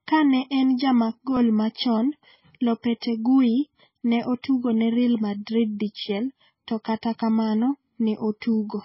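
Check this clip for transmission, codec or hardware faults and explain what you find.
One fault runs through the whole speech clip: low-bitrate audio saved at a high bitrate. Nothing is present above 5.6 kHz from start to finish, a ceiling that points to a very low-bitrate MP3 source, roughly 17 kbit/s, later re-encoded as a much larger MP3, which fits a 192 kbit/s file. The likely cause is that re-encoding, which cannot restore what the first pass discarded. Unlike a genuinely high-bitrate MP3, the sound keeps the first encoder's narrow band despite the file's size.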